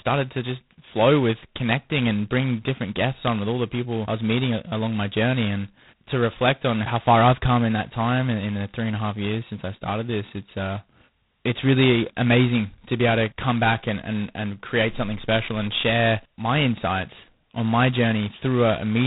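Throughout, heavy G.726 ADPCM coding, consistent with its lowest 16 kbit/s rate, leaves a harsh rasping hiss tracking the speech level, with nothing above 3.9 kHz.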